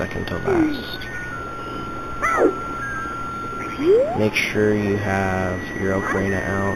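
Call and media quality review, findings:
Imaging from linear upsampling, whole clip. Dull top end with a faint metallic shimmer on sibilant, bright sounds. Mirror image of the band sits at 4 to 8 kHz, around 25 dB down. The pattern points to an 8 kHz source raised to 48 kHz by straight-line interpolation. That interpolation is a weak filter, so images survive. Suspect the resampler stage.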